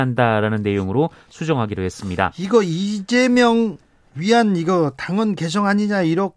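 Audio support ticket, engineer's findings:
No faults found: the speech signal is intact and continuous throughout, with no audible defect attributable to any component in the chain.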